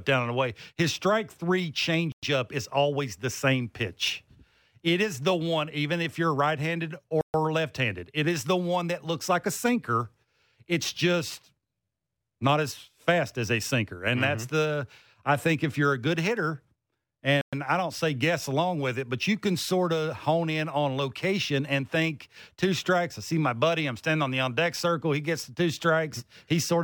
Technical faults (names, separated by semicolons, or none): Bluetooth stall